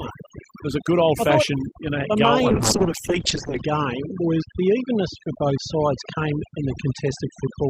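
Overdone noise removal runs the whole way through: the suppressor was set too hard, so the background drops and breaks up into twinkling specks. From 2.49 s to the end there's a call bitrate drop, consistent with the encoder falling from about 40 to 8 kbps. The top end closes from 20 kHz to 8 kHz, so it turns muffled and rough, worst for about 1.12 s.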